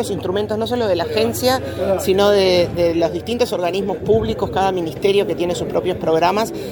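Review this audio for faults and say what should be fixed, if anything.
Nothing stood out on listening, so there is nothing here that calls for a fix.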